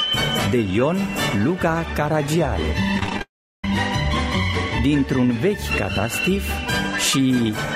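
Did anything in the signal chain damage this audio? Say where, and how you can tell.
Yes. From 2.97 to 3.21 s the sound turns choppy and robotic. This is repeated packet loss on the network, with seven short gaps, none over 21 ms, each patched by stretching the preceding audio.

From 3.21 to 3.64 s a brief fading buzz drops into about 0.36 s of silence before the sound resumes. This is likely a long network dropout, and the lost audio never returns.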